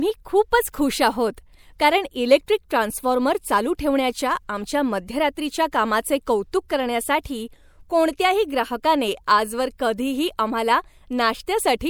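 At 2.46 s, after "खूपच खुश आहोत कारण", and again at 2.69 s, just before "ट्रान्सफॉर्मर चालू ठेवण्याच्या आमच्या", there is pre-echo. A transform codec spread quantisation noise across its block, so noise scaled for a sharp speech onset leaked into the quiet gap ahead of it, about 16 ms the first time and 18 ms the second. Each onset is heard as a brief hiss arriving early, with the attack itself slightly softened and smeared.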